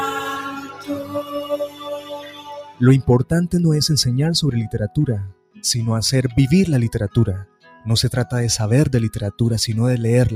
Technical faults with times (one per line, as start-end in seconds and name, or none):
0.00-10.36 noise suppressor applied to music or sounds
0.13-2.81 sound cut by the noise suppressor
5.30-5.63 sound cut by the noise suppressor
7.45-7.86 sound cut by the noise suppressor